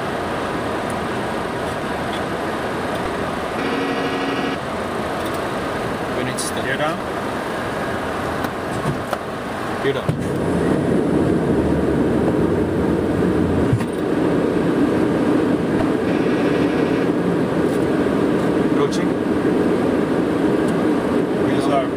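Damaged data in a compressed stream causes four short glitches in the audio, at 3.03–3.07, 6.98–7.01, 12.25–12.29 and 15.78–15.81 s, as the decoder misreads corrupted frames and resyncs at the next header.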